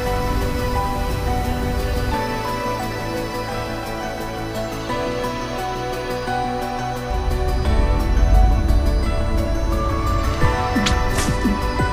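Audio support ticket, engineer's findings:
USB whine throughout: fixed tone at 1 kHz, strongest harmonic at 4 kHz, roughly 25 dB under signal. USB 1 ms frame current leaking via power/ground; 1 kHz series, not mains hum.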